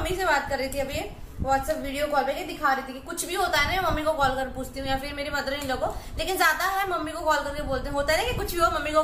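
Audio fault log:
No faults were found in this clip, with nothing to flag at any point.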